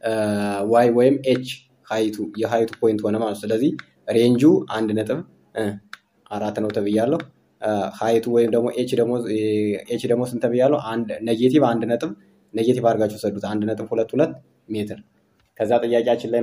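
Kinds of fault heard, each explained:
No kinds of fault are heard in this audio.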